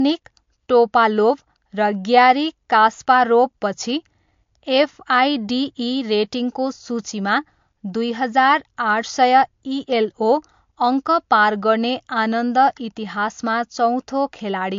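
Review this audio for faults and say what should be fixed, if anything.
Throughout the speech, nothing reaches above 7.2 kHz. That's low-bitrate audio saved at a high bitrate, likely a 48 kbit/s MP3 re-saved at 192 kbit/s, which can't restore the missing top end. To avoid it, export straight from the original recording rather than re-encoding a compressed copy.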